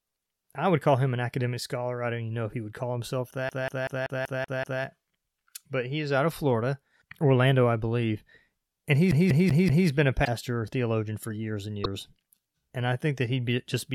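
Right after "he would call himself", from 3.49 to 4.83 s, the speech locks into a fast, even stutter: a 0.19 s fragment plays seven times over, each pass ending in a brief mute before it jumps back. That is a CD stuck on one turn, where a scratch knocks the laser back one track at the same point of every rotation. It happens again from 9.11 to 9.88 s, with the same 0.19 s loop repeating four times.

Between "been a" and "theologian for years and", from 10.24 to 10.28 s, there is a short glitch where the audio lurches forward with a chirp or a small gap. A second one follows at 11.83 to 11.86 s, just after "theologian for years and". The likely cause is a broken MP3 bit reservoir. Frames were lost, so the next frames reached back for borrowed data and decoded bytes belonging to another frame. The length of each glitch fits roughly one or two 26.1 ms frames.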